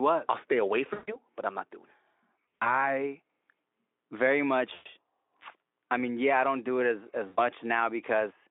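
At 0.93 to 1.18 s, 2.60 to 2.88 s, 4.73 to 4.86 s and 7.27 to 7.39 s the speech smears into a buzzy, fading tone and stays weak briefly afterwards. This is VoIP packet loss concealed by the speech codec. The Speex decoder, which otherwise sounds clean on its narrow telephone band, filled gaps of about 140, 120, 120 and 100 ms by repeating its last pitch and filter at falling gain. At 2.60 s the losses come scattered across 160 ms rather than in one block.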